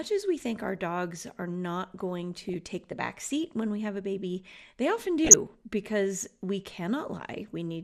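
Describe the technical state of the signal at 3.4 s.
At 3.4 s the signal shows what is likely MP2 compression, present across the whole clip rather than at that moment alone. The encoder splits the audio into 32 sub-bands and, starved of bits at a rate that fits roughly 80 kbps, shuts off upper bands and quantises the survivors coarsely. The sound there is plainly dulled, with high frequencies flickering in and out and a gurgling, granular roughness riding on what remains.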